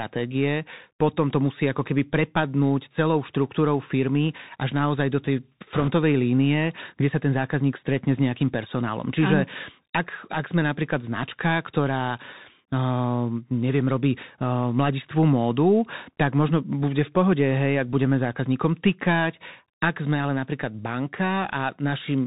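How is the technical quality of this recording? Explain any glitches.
The recording is narrowband and noticeably degraded, with one short burst of extra noise.

The Bluetooth CVSD headset codec affects the whole clip. The speech is coded one bit at a time with an adapting step, which fits a 64 kbps link, and nothing above 4 kHz passes. The result is dull and muffled, with scratchy s sounds, rough loud peaks and a grainy hiss underneath.

Bit errors on the Bluetooth voice link appear from 5.74 to 5.89 s. Around 4 percent of the bits were flipped in that stretch. Each bit carries only a small step and the errors fade quickly, so there are no sharp clicks. Instead there is a brief rushing, crackly noise over the speech.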